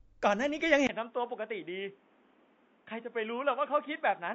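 From the very start the speech has that rough, grainy edge of low-delay AAC compression, likely AAC-ELD at a low rate, and the damage is plainly audible. The short frames can't pin down the pitch harmonics cleanly, so there's a noisy fizz between them and the top end sounds thin and a bit synthetic. The amount of grit fits something around 32 kbps.

Then at 0.87 s there's a brief gap of about 20 ms, and from there to the end the sound is different. That's an input switched to a poorer device, likely a drop to a lesser mic or a headset's call profile. Nothing comes through above 3.8 kHz, so it goes dull and boxy. It's roughly 10 dB quieter, with a new background hiss sitting fairly far under the speech, maybe 30 dB down.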